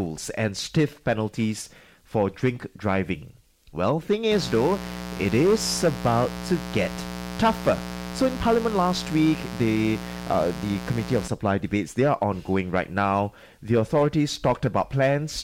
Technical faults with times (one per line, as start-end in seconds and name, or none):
4.32-11.28 mains buzz